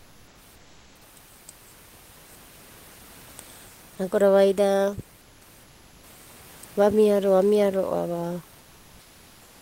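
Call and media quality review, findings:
Comfort noise in place of the background: flat, featureless hiss at 0.00–0.33, 0.55–1.01, 5.21–5.41 and 5.63–6.03 s, about 1–2 dB quieter than the room noise. Likely Opus DTX synthesising noise during pauses.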